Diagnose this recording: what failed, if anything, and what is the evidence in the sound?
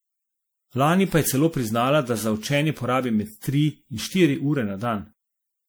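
Codec stage: the speech sounds swirly and hollow throughout, with smeared attacks, worse than a single MP3 pass near 96 kbit/s would produce. This is likely generation loss from about seven re-encodes on shifting frame grids. A spectrogram shows accumulated spectral holes and flickering highs, and the waveform shows blurred onsets.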